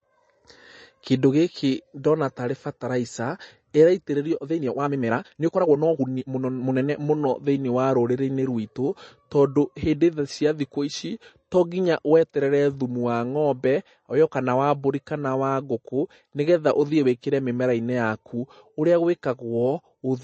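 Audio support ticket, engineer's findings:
Watery, swirly speech with plainly audible codec damage across the whole clip. Spectrogram: hard ceiling at 8.3 kHz, upper bands patchy and flickering. Likely MP3 encoding, consistent with a bitrate around 32 kbps: weak frequency lines zeroed frame to frame.

Rushed speech at 4.34–7.0 s, pace 1.55 times normal, pitch unchanged. Likely a time-stretched section, squeezed by dropping short pieces. Waveform: syllables packed closer together. Spectrogram: harmonic spacing same as surrounding audio, events compressed in time.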